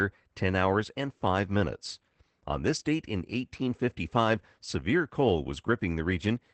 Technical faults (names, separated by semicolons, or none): Opus voice compression